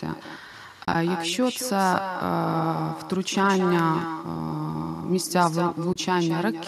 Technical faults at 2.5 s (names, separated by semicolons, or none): echo with no canceller